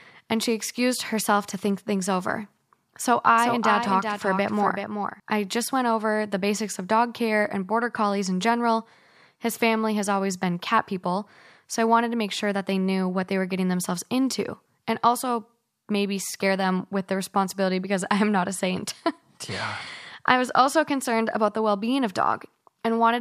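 A speech recording with a doubled audio track between 3.38 and 5.20 s, starting just before "I just went over". A second full-band copy of the speech runs roughly 0.4 s behind the original, only around 5 dB quieter, and it appears and vanishes abruptly at those points. Unlike an echo or room reverb, it is a single copy with no decay or added room colour. The likely cause is the sound being captured again through a slower path.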